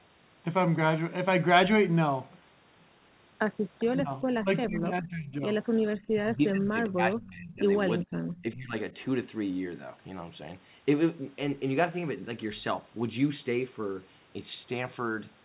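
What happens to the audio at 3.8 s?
Between 3.79 and 3.85 s, the far end's echo canceller likely failed to remove a fragment of what its loudspeaker played into its microphone. This echo leak sends the speech back 406 ms late as a brief, faint copy well below the main speech.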